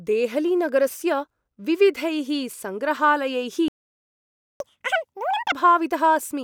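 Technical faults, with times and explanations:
3.68–4.60 s, playback stall: the speech stops dead mid-flow and the output stays silent for about 0.92 s. The likely cause is that the player ran out of buffered data or its playback thread was held up. Unlike a dropout, where a stretch of audio is lost and the speech jumps ahead, nothing is skipped here. The sound picks up again exactly where it broke off, with only silence inserted at that point.
4.60–5.52 s, catch-up at higher speed: straight after the stall the speech runs at 2.0 times normal speed for about 0.92 s. Its pitch rises by roughly ten semitones, giving a chipmunk-like quality. The player is resampling its backlog to win back the lost time, and it returns to normal rate once it has caught up. Because speed and pitch rise together for a short spell that ends on its own, this is catch-up resampling, not a steady pitch or clock-rate error.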